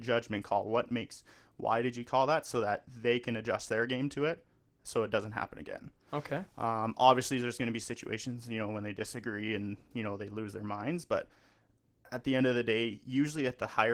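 Opus voice compression throughout leaves the speech hoarse and faintly robotic, pointing to about 16 kbps; the spectrogram's upper band looks smeared and blocky.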